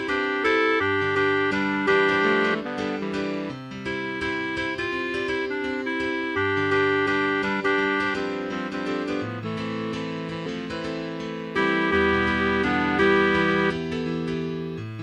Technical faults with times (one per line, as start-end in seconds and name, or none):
2.53-2.55 damaged data in a compressed stream
10.45 damaged data in a compressed stream